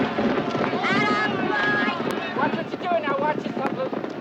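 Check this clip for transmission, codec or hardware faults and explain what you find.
Three loud pops at 0.64–0.66 s, 2.11–2.13 s and 3.67–3.69 s. Each is a single sharp click well above the sound, the first about 20 dB over it and the other two around 15 dB, with the audio carrying on underneath. Likely a brief voltage spike from a switch, connector or static, shaped by the circuitry downstream.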